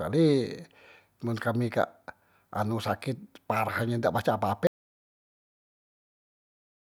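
At 4.67 s the speech cuts out mid-flow. An audio dropout to silence follows and lasts to the end. The gap is silent, with no room tone. The input was likely lost while the recorder kept writing silence.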